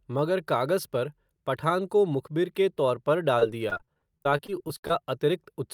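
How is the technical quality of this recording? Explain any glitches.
The recording is marred by one stretch of repeated packet loss (robotic sound) from 3.39 to 4.93 s. Over those 1.5 seconds the speech drops out more than a dozen times, with holes up to 58 ms long. Each hole is bridged by extending the preceding sound, covering about a fifth of the stretch, before the next loss arrives. The result is choppy speech with pieces missing. On a spectrogram, smeared, repeated frames and abrupt cuts break up the harmonics, and the waveform shows stuttering, chopped segments.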